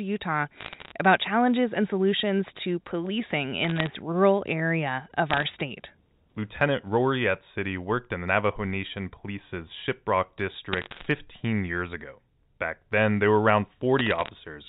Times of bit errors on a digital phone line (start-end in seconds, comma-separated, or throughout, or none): 0.61-0.92, 3.64-3.87, 5.31-5.44, 10.73-11.06, 13.99-14.29